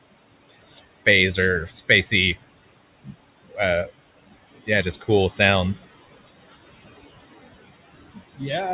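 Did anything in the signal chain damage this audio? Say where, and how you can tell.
Yes. Noise suppressor artifacts come from call processing throughout: gaps between phrases sink about 18 dB, and the noise rises again under the words.

Speech cut by the noise suppressor occurs from 3.04 to 3.14 s. The same call stage mistook speech for noise and pulled it down about 17 dB, carving a brief notch in the waveform.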